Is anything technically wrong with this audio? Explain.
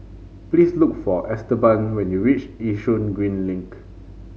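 No, nothing technical stands out here; the speech comes through without any fault to point to.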